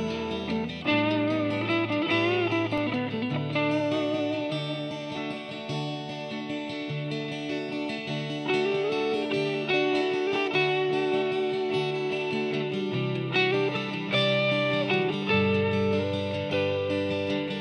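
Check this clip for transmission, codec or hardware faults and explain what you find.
One fault is present. At 2.78 s there is a block of digital silence lasting about 1.45 ms, which fits a 64-sample block. The output buffer was likely not filled in time, so the signal drops straight out and back without any fade. A gap this short is heard as a brief tick or dip rather than as silence.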